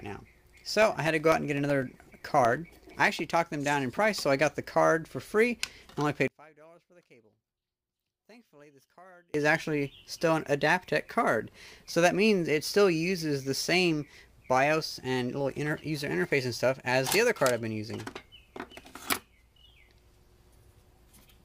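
From 0.07 to 3.07 s there are periodic USB or driver dropouts: every 0.125 s a gap of about 2 ms is replaced by silence as the bus or driver stalls, giving around thirty evenly spaced ticks that occur only while sound is present.

Between 6.28 and 9.34 s the level falls by about 30 dB, leaving a faint remnant. The likely cause is one channel inverted, so the material common to both sides cancels in a mono sum and only the difference survives.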